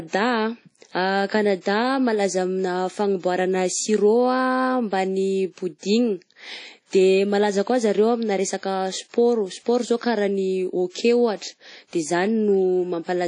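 Throughout the speech there is plainly audible transform-codec damage, likely from WMA compression at a low bitrate, in line with about 32 kbps. Nothing remains above 10.1 kHz, weak spectral detail is zeroed, and long-block quantisation noise smears into a ringing, washy hiss that pumps with the signal.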